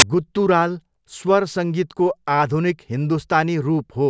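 At the very start, from 0.00 to 0.02 s, a hard-edged burst of loud white static cuts in, switching on and off abruptly with no fade. This is file tags played as audio: an embedded cover picture, stored as compressed data, was read by the player as though it were samples. Compressed bytes look essentially random, so they come out as loud, flat, broadband noise rather than anything tonal.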